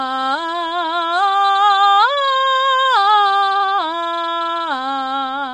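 A short music clip with plainly audible low-delay AAC compression running from start to finish: the sound is rough and grainy, with noise filling the gaps between harmonics and nothing above 11.5 kHz. On a spectrogram this shows as a flat ceiling at 11.5 kHz and blurred, smeared partials with speckled noise between them. The likely cause is AAC-ELD, whose short frames resolve pitch harmonics poorly, and the damage fits a bitrate around 32 kbps.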